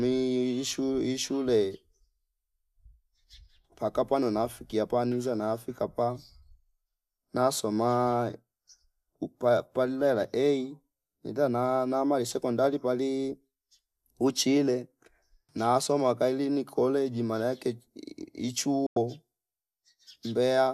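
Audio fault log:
18.86–18.97 s, digital broadcast dropout: the receiver stopped getting valid frames and muted its output until good ones returned, which fits about four lost frames. The speech fades out over 3 ms into a 96 ms silent hole, and what was sent then is gone.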